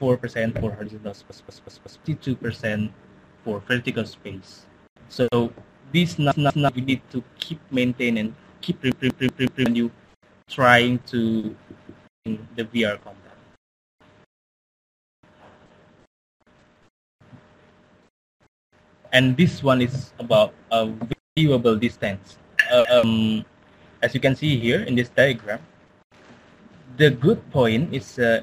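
At 1.3, 6.32, 8.92, 11.7, 14.49 and 22.85 s there's a repeated buffer: audio arrived late, so a chunk of about 186 ms, which fits an 8192-sample buffer, replays one to four times with hard joins. You hear a stutter, dropping roughly 0.2 to 0.7 s each time.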